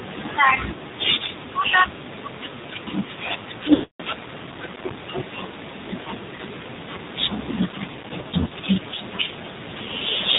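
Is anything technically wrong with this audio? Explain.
Yes. Two faults are audible: narrowband mobile codec coding for the whole clip, and several bursts of lost frames.

The AMR narrowband mobile codec is present throughout, with plainly audible damage. The speech is band-limited to below 4 kHz, so it sounds muffled and phone-like. The codec rebuilds the voice from a vocal-tract model excited by a few pulses per subframe. At this low rate the pulse budget is thin, which gives a buzzy, synthetic edge. That fits a low mode of around 7.4 kbps.

Lost AMR speech frames occur at 0.74 to 0.80 s, 3.74 to 4.03 s, 6.36 s, and 8.22 to 8.53 s. When a frame is lost, the decoder repeats the last good pitch and vocal-tract settings at falling gain. At 0.74 s about 40 ms is lost, and at 6.36 s about 20 ms, heard as brief dips or warbles. The 260 ms run from 3.74 s is drawn out, fades to silence, then returns weak or rough. 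From 8.22 s, about 100 ms of single isolated frames is lost across 280 ms, giving a string of short flickers.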